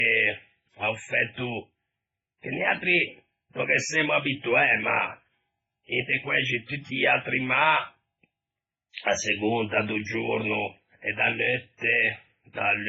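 From start to end, the speech carries a hard ceiling, with nothing above about 7.8 kHz, and two different kinds of artefact heard together. This points to transcoding between lossy codecs, likely a low-rate MP3 stage followed by Opus. The second codec re-encodes the first one's damage and adds its own. On a spectrogram, the flat cut-off runs the full length, with blotchy, patchy energy beneath it.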